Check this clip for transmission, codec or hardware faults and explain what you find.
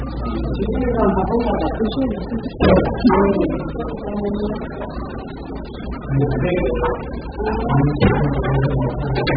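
One codec fault runs through the whole clip. AAC compression, likely AAC-LC at a very low bitrate near 8 kbps, removes everything above 5 kHz, leaving dull, smeared, warbling audio. A spectrogram shows a hard ceiling and patchy holes.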